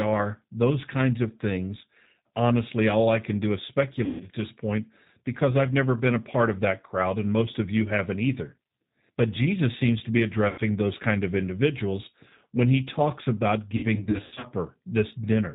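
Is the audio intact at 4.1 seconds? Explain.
No. At 4.1 seconds the audio falls inside a stretch of VoIP packet loss concealed by the speech codec. It runs from about 4.05 to 4.28 s. Roughly 150 ms of audio never arrived. The decoder filled the gap by repeating its last pitch and vocal tract filter, with the gain dropping frame by frame. What you hear is a smeared buzzy tone or coloured noise that fades, then a weak or distorted restart as the decoder recovers.

That moment also carries the G.729 codec damage present through the whole clip. The sound points to the G.729A variant at about 8 kbit/s. Speech is rebuilt from a filter, a pitch predictor and a few pulses per frame. Nothing above 4 kHz survives. The result is dull, rough and plainly synthetic. It adds a grainy, muffled character around the concealment.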